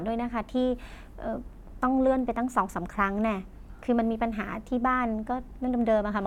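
No technical faults are audible.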